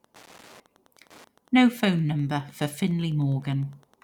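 A Wi-Fi radio sitting close to the audio circuitry is being picked up and rectified, so its beacon transmissions, repeating every 102.4 ms, leak into the signal for the entire length of this speech recording. That Wi-Fi interference is heard as a steady, regular ticking at almost ten clicks per second, sitting roughly 35 dB below the speech, faint but persistent.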